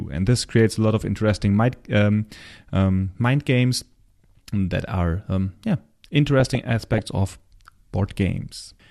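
From 6.26 to 6.99 s, just after "that are yeah", the speech breaks into DAB burbling. Weak reception let bit errors, at a rate of a few tenths of a percent, slip past error correction into the MP2 data. Corrupted samples put short blips of noise in single sub-bands, and corrupted scale factors make individual sub-bands leap in level for up to a frame, which fits around thirty frames being hit. On a spectrogram it appears as scattered short blocks, each no longer than a frame and one band high.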